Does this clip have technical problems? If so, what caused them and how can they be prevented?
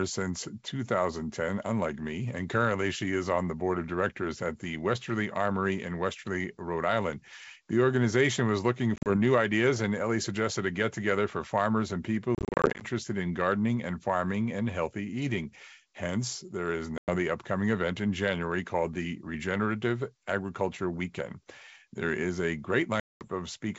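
Yes: packet loss on an ADPCM call, over the G.722 wideband link at 64 kbit/s. Hard-edged silent holes fall at 8.96–9.13 s (after "organization was looking"), 12.35–12.84 s (scattered gaps), 16.98–17.16 s (after "there is") and 23.00–23.25 s (after "is a"). Unlike smoothed concealment, the gaps are true silence, and after each one the speech returns slightly distorted while the decoder's predictor and step size resynchronise. Jitter buffering, packet loss concealment or FEC would prevent it.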